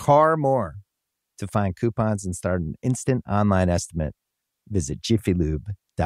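No technical faults are audible.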